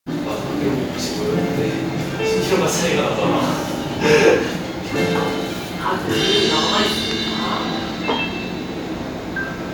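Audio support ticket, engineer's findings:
No audible technical faults found: signal level steady, no dropouts, discontinuities or distortion detected on listening, playback path behaving as expected.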